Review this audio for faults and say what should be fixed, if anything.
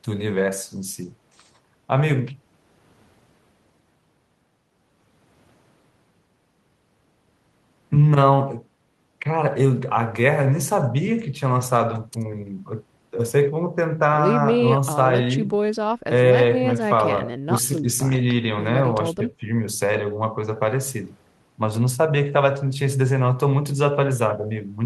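Nothing stood out on listening to this speech recording, so there is nothing here that needs fixing.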